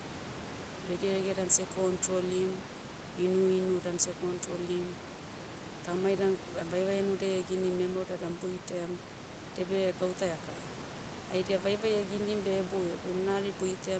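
No faults: the top end stops at 8 kHz, which fits a wideband call codec and the call microphone processing, and the room noise sits about 12 dB under the speech, as expected for a call recording.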